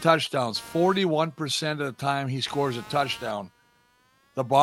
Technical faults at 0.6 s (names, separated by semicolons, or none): computer activity noise